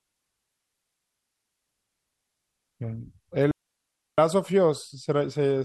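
At 3.51 s the speech drops into near silence until 4.18 s, a gap of about 0.67 s. This is a digital wireless dropout: the receiver lost too much data and muted with a very brief fade. Unlike an analogue radio dropout, the hole is clean, with no noise burst before or after it.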